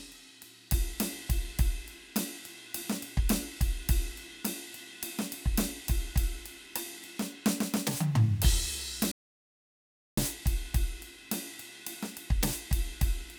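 At 9.12 s the music cuts off dead and stays out until 10.17 s, an audio dropout to silence of about 1.06 s. The input was likely lost while recording continued, writing silence. Unlike a fade or noise gate, the gap is abrupt, plain silence with no room tone.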